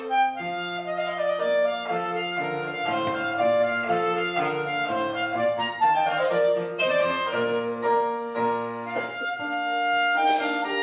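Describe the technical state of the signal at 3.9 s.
At 3.9 s the signal is intact, with no dropout, distortion, glitch or other fault audible at that point.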